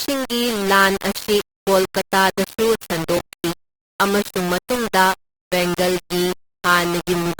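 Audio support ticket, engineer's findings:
Low bit depth without dither, whole clip: heavy grainy distortion that tracks the speech, noise floor only about 10 dB under the signal, quiet tails sputtering between steps. Likely cause: rounding to very few levels, which fits roughly 4-bit. Waveform: visible staircase steps, low-level passages collapsing to near-silence. Spectrogram: broadband hash that rises and falls with the speech rather than a steady floor.

Opus compression, whole clip: tones rough, noisy and grainy rather than swirly, with codec damage plainly audible. Likely cause: the music (CELT) mode at a low rate, consistent with about 24 kbps. The encoder fills starved bands with folded or noise content instead of leaving holes. Spectrogram: fullband, with few gaps and smeared noisy texture in the upper bands.

Robotic sound from repeated short buffers, 3.17–3.50 s: rigid metallic buzz at 66.8 Hz that follows the speech contour only roughly. 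Likely cause: late audio delivery, with the player looping the last chunk. A 66.8 Hz buzz implies a repeated segment of about 15 ms, and around two fifths of the audio in this stretch is replaced. Waveform: identical periodic blocks. Spectrogram: evenly spaced harmonic comb at 66.8 Hz spacing.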